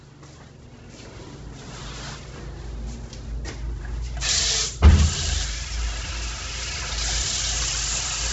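From the first moment to the end, these everyday sounds carry heavy codec damage of the kind that likely comes from Bluetooth LC3 compression. Nothing gets through above 7.8 kHz, so the top end is simply gone, and what's left has a grainy, breathy edge. That's the codec dropping much of the upper spectrum and papering over it with synthetic noise, which fits a very low bitrate, something like 16 kbps, with 10 ms frames.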